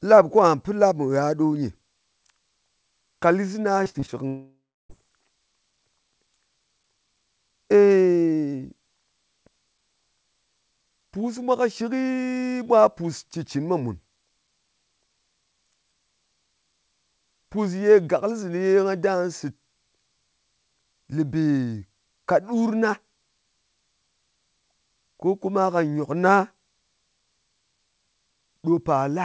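Repeated packet loss (robotic sound) from 3.84 to 4.10 s in this speech recording: four short gaps, the longest 48 ms, are patched by extending the previous sound, leaving about 40% of that stretch concealed and choppy. A long network dropout from 4.28 to 4.91 s is the likely cause of the next break: the last sound is stretched into a fading buzz, then roughly a third of a second of silence, and the audio resumes with that portion missing. The sound carries nothing above 8 kHz, which fits a G.722 call codec at 64 kbps.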